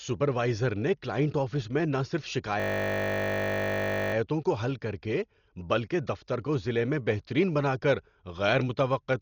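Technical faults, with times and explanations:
Throughout: Dolby Digital compression, likely. The speech sounds dull, with nothing above 6.9 kHz. Heavy rough, fluttering noise surrounds the tonal parts. Many frequency lines got no bits and were filled with noise, which fits a low bitrate near 40 kbps.
2.6 to 4.14 s: system hang loop. The audio froze on one 20 ms piece that repeated exactly, over and over. That short cycle sounds like a steady buzz at 50 Hz. The hardware kept replaying its buffer while the system stalled, and little audio seems skipped.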